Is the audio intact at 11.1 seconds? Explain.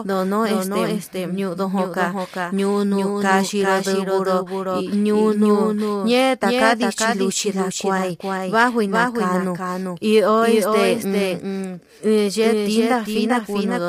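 No. At 11.1 s, as everywhere in this speech clip, a second full-band copy trails the original by about 400 ms and about 5 dB quieter, with no decay or room colour, like a dry echo. This doubled audio track likely comes from the sound being captured twice, once through a slower path.

The speech is also plainly rough and grainy, with noise filling the gaps between harmonics and a thin, artificial-sounding top band. That points to low-delay AAC compression (AAC-ELD), likely at a bitrate around 32 kbps, where short frames resolve pitch harmonics poorly.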